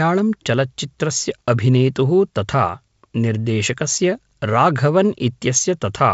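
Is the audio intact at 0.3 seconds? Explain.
Yes, at 0.3 seconds the audio is intact, with no fault at that moment, and the G.722 wideband coding at 56 kbit/s passes the speech there with its content stopping below about 7.7 kHz.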